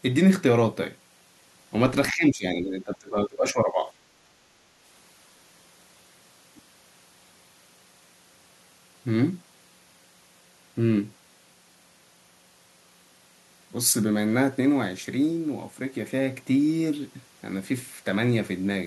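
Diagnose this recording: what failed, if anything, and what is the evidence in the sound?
From 2.11 to 3.91 s the speech dips by up to about 20 dB and breaks up, likely speech suppressed in double talk, where call-processing echo control ducked the talker.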